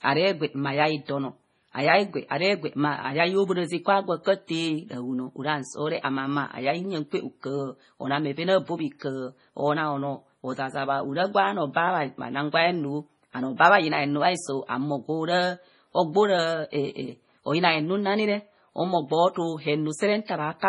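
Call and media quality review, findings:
MP3 compression artefacts, throughout: watery, swirly speech, s sounds chirpy, nothing above 10.6 kHz. Likely a starved encoder zeroing weak lines, fitting roughly 24 kbps.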